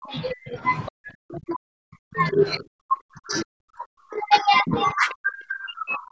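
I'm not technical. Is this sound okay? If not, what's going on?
No. The speech keeps dropping sharply in level, almost to silence, from 0 to 0.63 s, 0.89 to 2.41 s, 2.59 to 4.77 s, and 4.93 s to the end. This is speech suppressed in double talk: the call's echo canceller likely turned everything down while both people spoke at once. Brief scraps of the other side's voice leak through at 0.86 to 0.91 s and 5.10 to 5.14 s, faint and short, because the echo canceller likely missed some of the loudspeaker sound.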